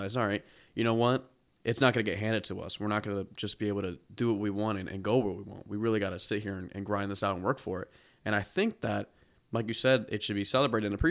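No technical faults can be heard anywhere in the speech, so there are none to describe in time order.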